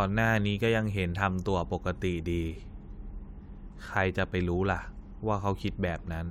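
Nothing technically wrong turns up in this short speech recording; there's no fault to point to anywhere along it.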